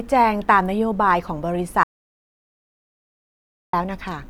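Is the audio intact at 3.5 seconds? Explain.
No. At 3.5 seconds the speech sits inside an audio dropout to silence running from 1.83 to 3.73 s, about 1.9 s of silence with no room tone, most likely from the input signal being lost while recording continued. Anything spoken there is gone.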